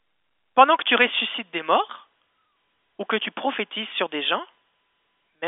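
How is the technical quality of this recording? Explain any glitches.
No glitches or technical faults can be heard here.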